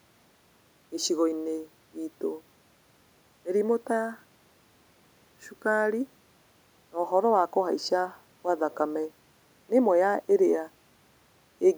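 No technical faults are audible.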